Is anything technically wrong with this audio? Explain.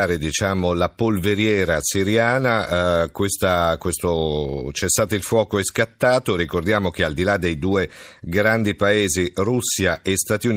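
No, I can hear nothing technically wrong here.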